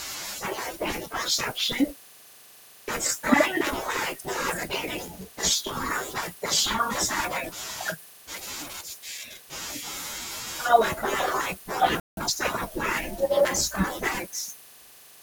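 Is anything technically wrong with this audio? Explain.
Yes. At 12.00 s a playback stall, likely the player starving for data or its thread blocking, cuts the speech to silence for about 170 ms until 12.17 s. From 12.17 to 12.33 s, time-compressed catch-up drops and cross-fades small slices to clear the backlog, so the speech runs at double speed but normal pitch.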